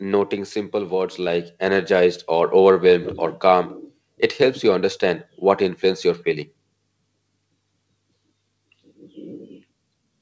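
From 0.72 s to 2.58 s the speech and the room behind it swell together, climbing by about 7 dB over nearly two seconds. This is automatic gain rising: the gain control judged the input too quiet and raised its gain step by step, lifting everything it hears. The call path's band limit stays audible throughout, with nothing above 8 kHz, which fits a wideband call codec such as G.722.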